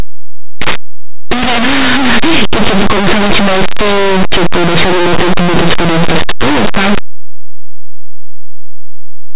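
From start to finish the speech suffers linear audio read as companded: plain linear 8-bit samples are decoded as mu-law, so values hovering just beside zero get expanded into huge outputs. Everything sounds very loud and harshly distorted.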